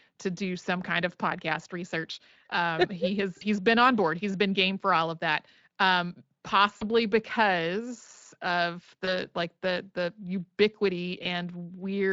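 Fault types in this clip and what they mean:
VoIP packet loss concealed by the speech codec: at four points the decoder stretches its last sound across 20 to 40 ms of lost packets, giving a buzzy or noisy, fading smear instead of a silent gap.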